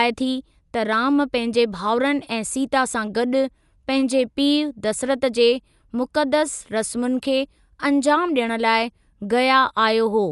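Throughout the speech, the damage points to a low-bitrate encode, likely Dolby Digital compression at something like 64 kbps. Short of bits, the encoder narrowed the band and left many frequency lines without mantissa data, so the decoder filled those gaps with dither noise. Nothing remains above 11.4 kHz, which makes the audio plainly dull, and a rough, fluttering noise clings around the tonal parts of the speech from start to finish.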